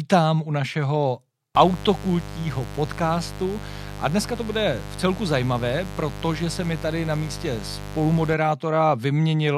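Right after "u našeho" at 1.55 s, a raspy 50 Hz mains buzz kicks in, switching spikes stacking harmonics upward, sitting maybe 10 dB under the speech until 8.34 s.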